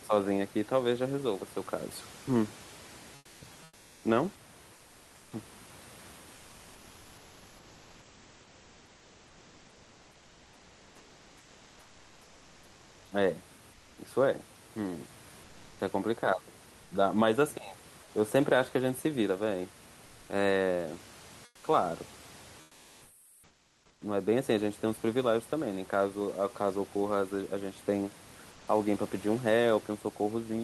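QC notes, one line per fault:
3.15–5.31, 6.35–13.95, 15.43–15.79, 16.83–16.91, 18.03–18.11, 21.47–21.63, 22.63–23.99 and 28.51–28.67 s, comfort noise in place of the background: in speech pauses the real room noise, about 26 dB below speech, gives way to steady, featureless synthetic noise, up to about 7 dB quieter. This is likely Opus DTX halting transmission during silence while the receiver fills the gap.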